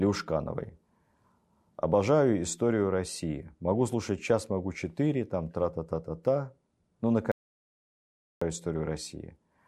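At 7.32 s there's an audio dropout to silence: the speech cuts to silence until 8.42 s, likely a lost input, losing about 1.1 s outright.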